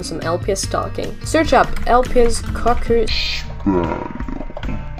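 From 3.08 s to the end, the audio drops to half speed and a full octave lower. This is stereo read as mono: left and right samples are taken in turn as one channel. On a spectrogram everything compresses downward, with a faint mirrored copy in the upper half.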